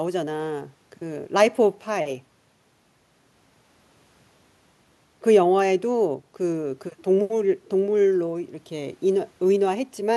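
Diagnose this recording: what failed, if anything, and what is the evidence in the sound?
Nothing in the signal chain has failed, and the recording gives no audible evidence of trouble at any stage from capture to playback.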